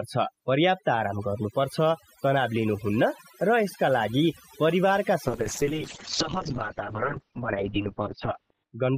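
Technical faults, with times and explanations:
Throughout: overdone noise removal. The background drops and breaks up into twinkling specks. An overly aggressive noise reducer is shutting off individual frequency bands near its noise estimate, taking quieter parts of the speech with them.
5.28 to 8.98 s: call bitrate drop. The speech turns rough and muffled, losing everything above 4 kHz where it previously reached 20 kHz. A falling bandwidth estimate pushed the encoder from 64 to 8 kbps, coding coarsely and holding its lowest rate for about 3.4 s.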